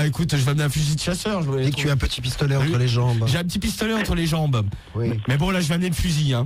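No technical faults are audible.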